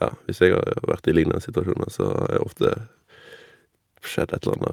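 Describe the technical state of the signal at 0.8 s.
At 0.8 s you're in the middle of clock drift between sender and receiver, with the sender's clock running roughly 5 percent fast, so the receiver's buffer keeps overfilling all the way through. The repeated timing corrections run from 0.07 to 4.70 s: the receiver keeps cutting short slices of speech to keep up, landing at about 104 percent speed, heard as small hiccups and a slightly rushed, uneven tempo.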